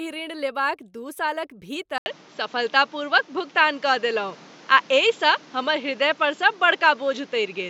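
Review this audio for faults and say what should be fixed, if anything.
Input switched to a poorer device at 1.98 s, lasting to the end: after an 80 ms silence the speech returns duller, with nothing above 7.6 kHz, a level shift of a few decibels and new background noise about 30 dB down, likely from recording moving to a narrower-band microphone. Lock capture to one fixed input and disable automatic device or headset-profile switching while recording.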